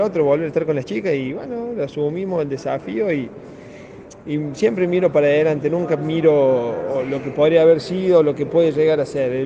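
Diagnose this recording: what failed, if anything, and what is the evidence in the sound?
Nothing failed; no stage shows an audible fault.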